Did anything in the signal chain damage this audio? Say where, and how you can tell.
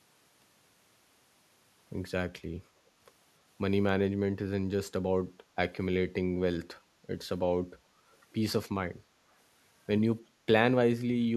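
Yes, at the call-processing stage. From 8.13 to 8.17 s a very faint echo leak appears: a brief scrap of the speech returns about 303 ms later, far below the direct voice. The likely cause is a far-end loudspeaker whose echo canceller let a residue of the microphone pickup slip back into the call. A fixed delay of roughly 0.3 s rules out room reverberation, which smears continuously from the onset, and codec pre-echo, which precedes a sound rather than following it.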